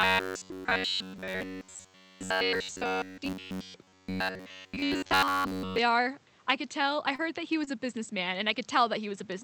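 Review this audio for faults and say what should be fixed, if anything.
From 0.01 s to 5.79 s the speech has a rigid, metallic buzz locked at about 93.8 Hz. It roughly follows the words. This is robotic sound from repeated short buffers. The period of that buzz, about 10.7 ms, fits audio arriving too seldom and the playback side looping the last short buffer while fresh audio is skipped, which is likely the cause. The repetition runs through essentially the whole stretch. To prevent it, make sure the capture or playback thread delivers buffers on time, for example by raising its priority or enlarging the device buffer.

At 7.15 to 7.21 s and 7.65 to 7.69 s there are brief smears, like a quick wobble in the speech. These are short concealed packet losses. About 40 ms and 20 ms of audio never reached the decoder in time. The receiver covered roughly 31 ms and 22 ms by extending the preceding sound, then blended back into the real signal, so any short consonant there may be gone. 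To prevent it, reduce network loss or let the jitter buffer hold a little more audio.

Five 20 ms patches, at 7.19 to 7.21 s, 7.53 to 7.55 s, 7.67 to 7.69 s, 7.93 to 7.95 s and 8.53 to 8.55 s, sound rougher and noisier but leave no gap. These are lost packets rebuilt from error correction. Each missing Opus frame was replaced by the low-bitrate copy carried in the next packet, which keeps continuity at reduced quality. To prevent it, address the packet loss on the network path, since the error correction is only masking it.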